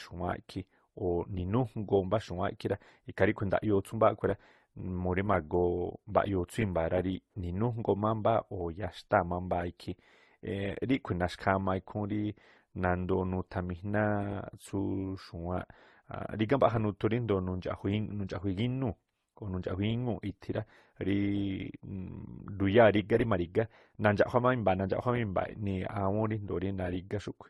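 Throughout the speech, nothing is present above 12.1 kHz, and smeared, warbling and watery artefacts of differing character sit on top of one another. The likely cause is transcoding between lossy codecs, consistent with an MP3, AAC, then Opus chain, each encoder re-coding the previous one's damage.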